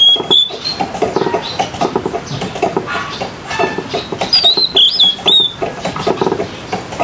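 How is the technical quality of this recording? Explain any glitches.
The recording suffers from gain pumping that runs through the whole clip. The gain swings by roughly 10 dB as it is pulled down on loud moments. Loud and quiet passages sit unnaturally close together, giving a flattened, squashed feel. The likely cause is input gain set far too high, with a fast limiter or compressor clamping down on every peak and releasing in the gaps. The call's microphone processing, which leaves nothing above 8 kHz, is normal rather than a fault.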